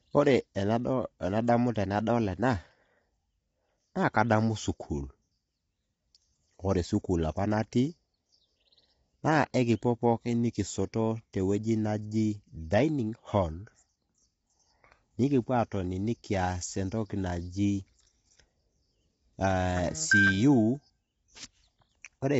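Speech runs through all 22 seconds with plainly audible roughness and graininess, likely from low-delay AAC compression (AAC-ELD), consistent with a low bitrate around 24 kbps. A spectrogram would show a hard ceiling at 7.8 kHz and blurred harmonics with noise filling the gaps between them.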